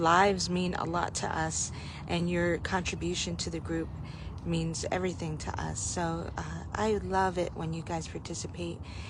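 From 2.74 to 5.44 s there's timecode bleed: linear timecode from a nearby track or cable leaking into this one. It's a faint, steady chirping warble sitting well under the sound, flipping between roughly 1 and 2 kHz at a 23.976 fps code rate.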